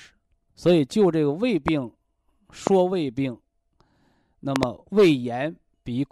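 Sharp loud pops jump out over the speech at 1.68–1.70 s and 2.67–2.69 s, then a double pop at 4.56–4.65 s, each about 15 to 20 dB above the speech, which carries on underneath. Each is likely a sudden voltage pulse from a plug, switch, static or driver glitch.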